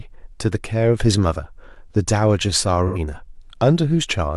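At 2.87 s there's a short smeared, noisy patch running to about 2.98 s. That's AAC frame loss with concealment: roughly 85 ms went missing, which fits two lost frames, and the decoder papered over the gap by reusing the last good spectrum.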